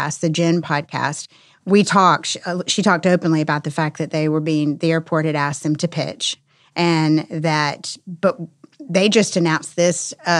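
No technical faults can be heard anywhere in this speech recording. Nothing in it breaks, drops out or distorts at any point.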